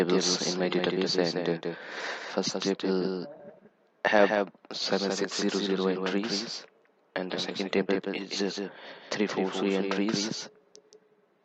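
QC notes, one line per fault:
throughout, doubled audio track: every sound is trailed by a dry, full-band second copy around 200 ms later and roughly 5 dB quieter, with no decay or room colour, likely from a second capture via a slower path or an edit holding two out-of-step copies.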